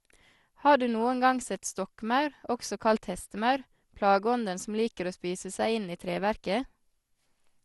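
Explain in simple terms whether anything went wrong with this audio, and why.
The speech sounds swirly, hollow and smeared from start to finish, with word beginnings blurred and nothing above about 12 kHz. This is generation loss: the audio was likely squeezed and unpacked around seven times with a lossy codec, and each pass added damage.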